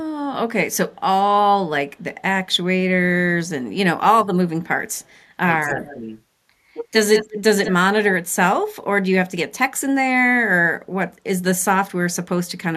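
In this speech recording, the voice briefly dips, by about 20 dB at 4.03–4.09 s and about 10 dB at 5.62–6.06 s, as if turned down. That is likely speech suppressed in double talk, where an echo canceller mistakes overlapping speech for echo and attenuates it. A delayed copy of the voice also trails along. It is barely audible at 4.96–5.14 s, 231 ms behind, then clearer at 5.67–5.99, 7.15–7.41 and 7.64–7.74 s, 195 ms behind and roughly 10–15 dB below the speech. This is likely echo leak from a loudspeaker the canceller did not fully cancel.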